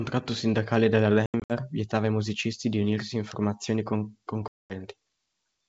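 Speech over a G.722 wideband call, likely 64 kbit/s, shows packet loss on an ADPCM call: between "sindacale della" and "vietava ai musicisti di" (1.26–1.53 s), about seven packets drop, 160 ms scattered over 240 ms with the longest gap 80 ms. Around 4.48–4.73 s, about ten packets drop (220 ms). Each gap shows as flat, hard-edged silence in the waveform and blank vertical stripes on the spectrogram. The decoder's predictor and step size lose track, so the sound returns slightly distorted before settling.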